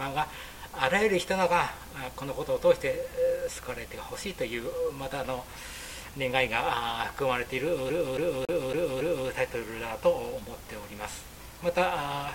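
From 7.90 to 9.29 s the audio gets stuck like a CD on one turn. A scratch throws the laser back, so a 278 ms slice plays five times, each jump marked by a brief mute. The even, rapid repetition separates it from network dropout loops, which vary.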